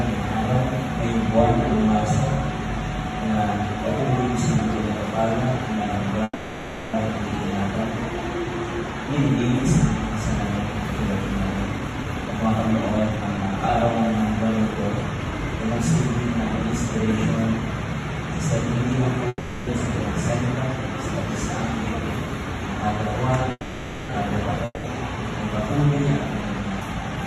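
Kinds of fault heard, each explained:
call audio freeze: Three stalls, at 6.23 to 6.96 s, 19.28 to 19.70 s and 23.51 to 24.12 s, lasting 700, 390 and 580 ms. Each time the last sound is drawn out and then gives way to about 30 ms of silence. The likely cause is delayed packets emptying the jitter buffer. Unlike a dropout, the audio resumes exactly where it stopped, so a gap is added and nothing is lost.
jitter buffer speed-up: Four stretches where the receiver trims short pitch-period slices to shrink a swollen buffer, so the audio runs faster at unchanged pitch. From 11.66 to 13.63 s it plays at 129% speed, shedding roughly half a second, and clearly sounds rushed. The runs at 14.48 to 15.59 s (106%) and 25.85 to 27.24 s (107%) also sound hurried, while 16.50 to 17.95 s (103%) stays below that threshold. No gap appears, which sets it apart from a stall.
long network dropout: One event at 24.65 to 24.87 s. 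For 190 ms the last sound is carried on, then about 30 ms of silence follows, most likely because the incoming audio stopped arriving. Unlike the freezes, the audio comes back further along: about 400 ms of material is skipped and never heard, and the delay shortens by roughly 200 ms. The jump in continuity, not merely a pause, is what marks it.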